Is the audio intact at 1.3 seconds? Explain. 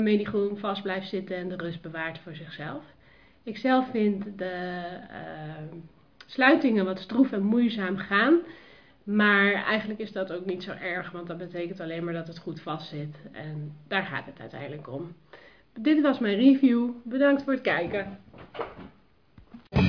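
Yes, the audio is intact at 1.3 seconds, with no dropout, click, distortion or other fault at that moment.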